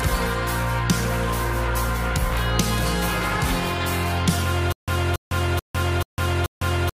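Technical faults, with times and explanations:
4.72 s to the end: stutter with silent gaps. Playback likely stalled and replayed its last fragment at each retry before running dry. A 280 ms burst repeats five times, each followed by 154 ms of digital silence, so it returns every 434 ms while the audio meant for that stretch is lost.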